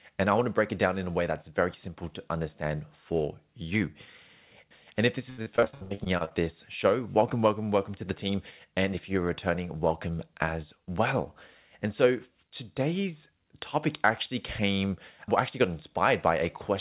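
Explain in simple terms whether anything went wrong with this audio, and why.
From 5.3 to 6.41 s there is repeated packet loss (robotic sound). Thirteen short holes, the longest 76 ms, were each patched by stretching the preceding sound, so almost half that stretch is filler. Unlike a single dropout's one silent gap, this gives a choppy sound with pieces missing.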